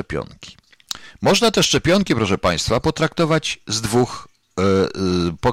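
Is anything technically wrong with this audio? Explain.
Yes. Hard clipping throughout: speech overdriven by about 13 dB has about 4% of its samples cut flat, with squared waveform tops, upward spectrogram smearing and harsh fuzz.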